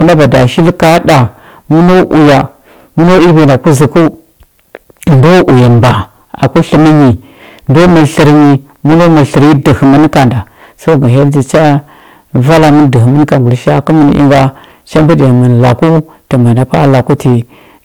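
Driven about 20 dB past what a stage could pass, the speech undergoes hard clipping throughout, nearly a third of samples flattened, giving harsh fuzz on every loud syllable.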